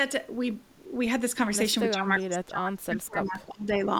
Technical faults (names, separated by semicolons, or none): speech suppressed in double talk; echo leak